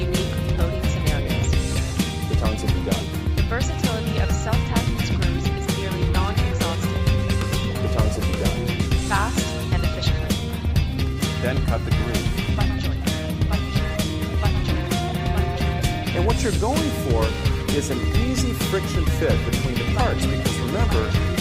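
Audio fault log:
No technical faults are audible anywhere in the clip, and the signal holds steady with no interruptions, level problems or added disturbances.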